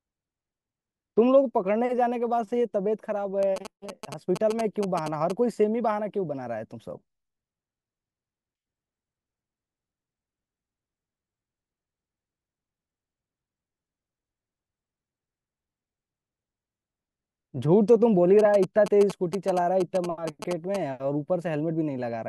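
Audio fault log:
3.43–5.32 s and 18.39–20.76 s: GSM signalling bursts, a galloping dit-dit-dit of short buzzes at about 217 Hz, roughly 10 dB below the speech. A nearby 2G phone signalling to its network sends brief radio bursts that the audio circuitry rectifies into audible pulses.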